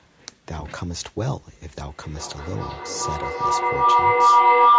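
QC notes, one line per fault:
1.78 s to the end, feedback howl: from 1.78 s the speech begins to loop back on itself, and each repeat comes back louder rather than fading, narrowing to a tone around 1 kHz, with the repeats roughly every 0.4 s. The round trip from microphone to loudspeaker has gain above one, so the tone builds until it peaks about 15 dB over the speech. On a spectrogram it is a thickening horizontal line near 1 kHz, well below the 8 kHz ceiling of the call audio. The waveform envelope swells with each repeat, about 0.4 s apart.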